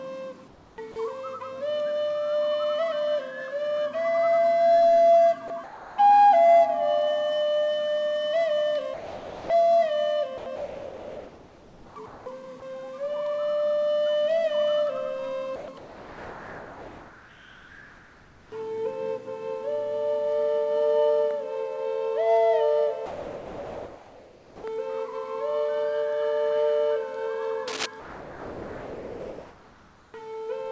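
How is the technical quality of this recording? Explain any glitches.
The recording has repeated gating glitches in which real audio is swapped for synthetic noise, plus one scratch. It passed through a call path with nothing above 8 kHz, which fits G.722 wideband coding.

Comfort noise in place of the background, 0.48–0.96 s and 15.56–18.52 s: the real background turns steady and featureless, likely because transmission paused and the receiver synthesised noise. No sound is lost, which sets it apart from a dropout.

Sound dropped by the voice detector, at 0.92–0.96 s, 15.56–15.68 s, 23.06–24.64 s and 28.00–30.14 s: the sound itself vanishes into steady noise and then returns. The detector likely mistook it for background. Each is a single gap, not a stutter.

Sound chopped by the voice detector, 5.48–5.98 s and 8.94–12.26 s: the audio flickers between real and synthetic several times, likely from the detector toggling repeatedly. 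The result is choppy, unlike a clean single drop.

Cable scratch noise, 27.67–27.87 s: a dense, uneven rustle sits just below the sound's level, likely from a worn contact being moved. It is a rough burst added on top, with nothing removed.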